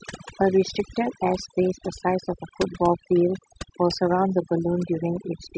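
Throughout, the background drops to near silence with twinkling specks: overdone noise removal, suppressing frequency bands near its noise estimate along with quieter speech detail.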